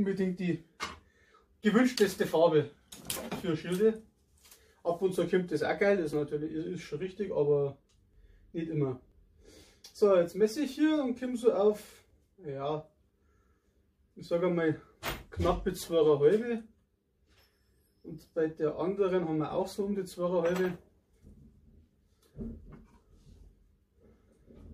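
Six brief skips land at 2.18, 5.15, 6.13, 8.14, 9.12 and 12.10 s. Each is an overlap between stream segments. The audio arrives in one-second pieces, and neighbouring pieces claim the same moment. The player trims the shared stretch, but that sound was never duplicated. So real audio disappears: about 6 ms at the first four points, about 15 ms at the last two. The waveform jumps across each gap. Every jump is heard as a small tick or skip.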